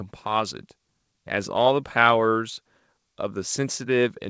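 No technical faults are audible.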